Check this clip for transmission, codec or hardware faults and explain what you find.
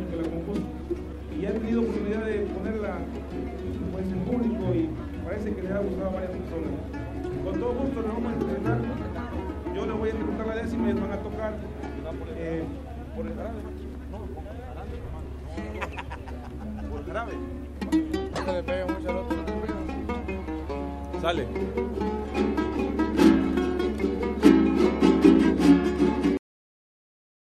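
One fault: a cut-off end. At 26.37 s the sound stops abruptly into digital silence with no decay, because the final buffers were never written or played out.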